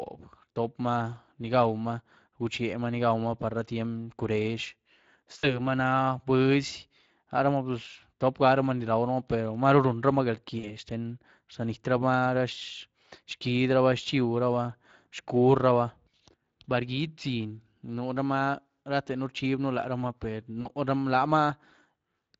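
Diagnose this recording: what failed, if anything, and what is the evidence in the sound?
Codec stage: Speex coding, consistent with roughly 20 kbps, leaves too few bits for the excitation, so the speech sounds plainly noisy and hoarse throughout.

Network stage: VoIP packet loss concealed by the speech codec at 5.39–5.6, 10.59–10.75 and 20.61–20.69 s, each 40 ms gap extrapolated from the last pitch and filter with the gain lowered frame by frame.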